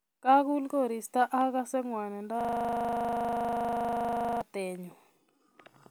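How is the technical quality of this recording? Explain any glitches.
Technical quality is poor in one stretch. There is a system hang loop from 2.41 to 4.41 s, right after "koristo agase ngwanindo". The computer or driver froze. The hardware kept cycling one 40 ms buffer, about 50 times. At a 25 Hz repeat rate, the speech collapses into a steady, rough buzz.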